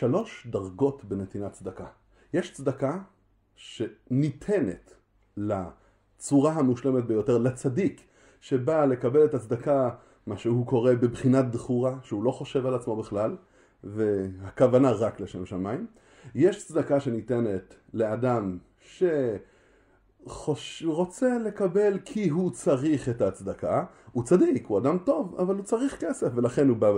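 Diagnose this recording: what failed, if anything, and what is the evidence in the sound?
Nothing failed; no fault is audible anywhere here.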